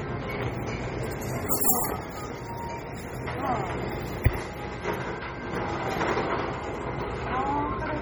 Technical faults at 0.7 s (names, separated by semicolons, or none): MP3 compression